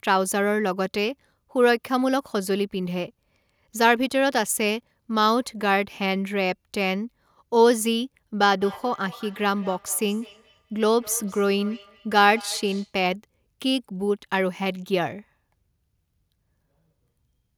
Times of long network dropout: none

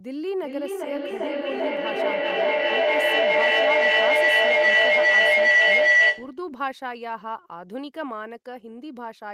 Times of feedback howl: 0.42-6.39

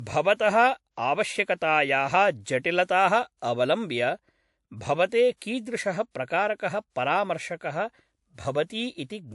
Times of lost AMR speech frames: none

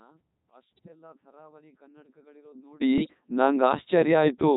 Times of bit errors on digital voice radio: 0.77-0.88, 2.98-3.14

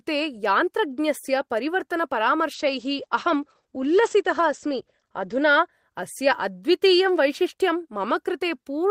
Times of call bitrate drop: 2.55-5.77

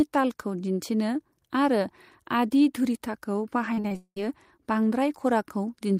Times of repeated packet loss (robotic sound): 3.74-4.17

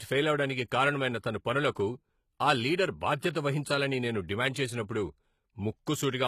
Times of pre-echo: 3.33-3.35

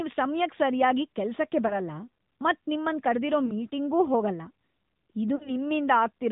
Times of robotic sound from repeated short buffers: none

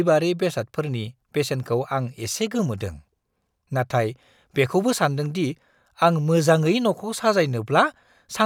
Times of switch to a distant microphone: none

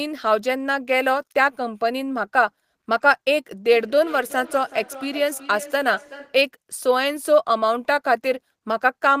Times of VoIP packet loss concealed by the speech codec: none

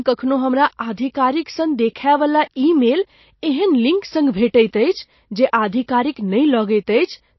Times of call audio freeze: none

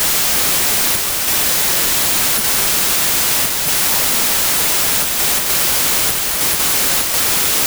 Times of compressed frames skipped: none

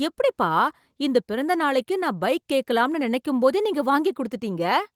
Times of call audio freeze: none

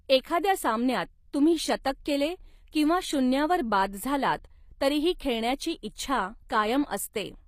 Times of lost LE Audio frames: none

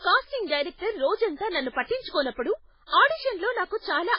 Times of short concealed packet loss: none

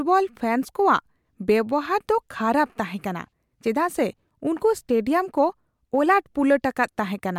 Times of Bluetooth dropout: none

